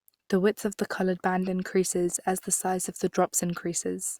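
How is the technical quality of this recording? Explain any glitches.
Nothing stood out as a technical problem on listening to this recording, so there are no glitches to explain.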